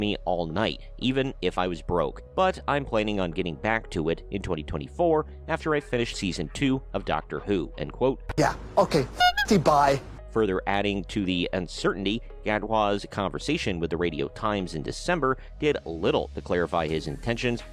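Nothing in this one stands out as a technical fault; the audio runs along without any dropouts, glitches or other problems to point to.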